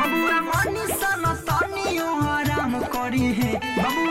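A digital input running on its own clock, unlocked from the sender's, slips about 150 ppm, dropping or repeating one sample at each slip. From 0.23 s to 4.08 s this produces word clock ticks: about thirty sharp clicks, roughly every 0.15 s, varying in strength.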